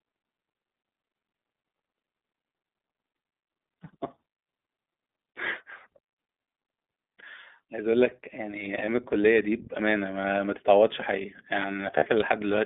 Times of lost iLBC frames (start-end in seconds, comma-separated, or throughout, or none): 8.86-8.89, 11.97-12.04